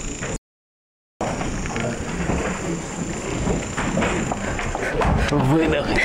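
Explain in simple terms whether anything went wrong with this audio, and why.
The input signal was likely lost briefly, an audio dropout to silence: from 0.36 to 1.21 s the sound cuts to dead silence, and about 0.85 s is gone.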